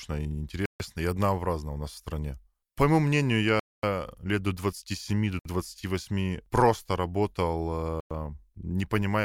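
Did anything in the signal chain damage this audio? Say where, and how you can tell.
Yes. Speech cuts to silence at 0.66, 3.60, 5.39 and 8.00 s (144, 237, 61, 105 ms), likely a Bluetooth stall: the wireless buffer ran dry awaiting resent packets.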